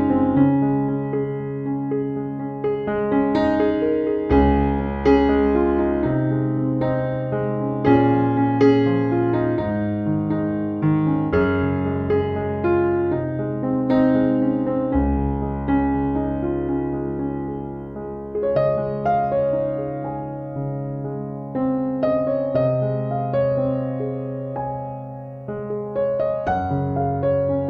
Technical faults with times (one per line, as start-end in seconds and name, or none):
none